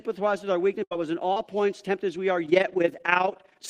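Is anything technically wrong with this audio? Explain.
Yes, there are three separate faults in this speech.

From 0.83 to 0.93 s there is a burst of packet loss. A run of packets totalling about 80 ms of audio failed to arrive in time to be played. The receiver covered roughly 74 ms of that by extending the last sound it had and letting it fade, so a held buzz or dying hiss replaces the speech. Then the audio jumps ahead, skipping what was lost.

At 1.33 to 1.38 s a smaller short concealed packet loss occurs. About 40 ms of the stream never reached the decoder, and concealment synthesised around 31 ms to bridge it, continuing the preceding sound before blending back into real audio. The result is a brief smear or wobble, and a quick consonant in that spot can disappear.

From 2.47 s to the end, overlap-add ripple sets in. The audio was split into windowed frames and rebuilt with an overlap whose gains don't sum evenly, so the level swings by about 11 dB once per frame, around 30 times a second. 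That regular pumping is heard as a rough, robotic flutter laid over the speech.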